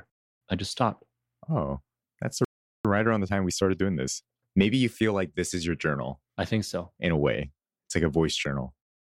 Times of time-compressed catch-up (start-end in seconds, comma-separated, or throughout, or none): 2.85-5.51